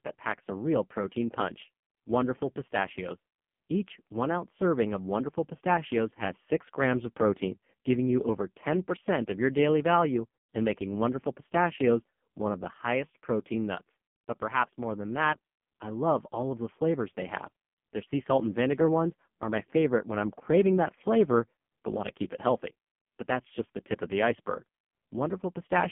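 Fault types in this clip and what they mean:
AMR narrowband mobile codec: throughout, speech is confined to 150 Hz to 3.4 kHz and rebuilt from sparse pulses, heavily buzzy and synthetic, fitting a low 5.15 kbps mode.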